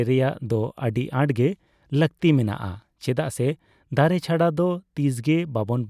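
No technical faults are audible.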